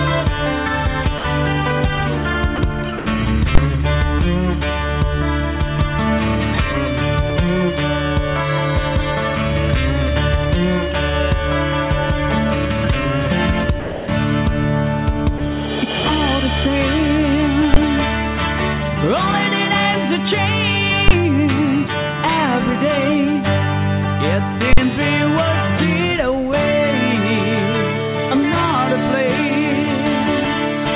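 Sound dropped by the voice detector occurs five times, at 1.18–1.24 s, 2.56–2.58 s, 2.98–3.06 s, 13.8–14.08 s and 15.38–15.40 s. Each time the audio briefly gives way to a steady hiss of comfort noise, for 20 to 80 ms and once for 280 ms, then returns. The likely cause is the sender's voice detector treating that stretch as background and pausing transmission, with the receiver filling the gap. Invalid numbers at full scale appear at 3.55–3.58 s, 17.74–17.76 s, 21.08–21.11 s and 24.73–24.78 s. Each is a very loud bang where a processing block output infinite or invalid values that were pinned to maximum level. The first three last about 23 ms, which fits a 1024-sample block, and the last lasts about 46 ms, which fits a 2048-sample block. All of it passes through a call path whose band stops at 4 kHz, consistent with a G.711 A-law codec.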